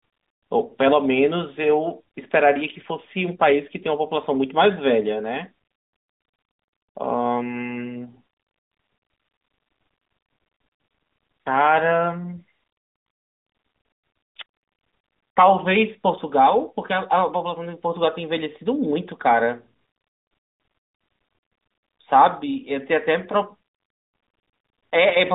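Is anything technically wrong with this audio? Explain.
Yes: lost AMR speech frames around 1.62 to 1.70 s. A frame failed its error check, so the decoder repeated the last good pitch and vocal-tract settings at reduced gain. This causes a brief dip or warble. The waveform shows a short drop in level, and the spectrogram shows harmonics smeared flat across a gap consistent with one 20 ms frame.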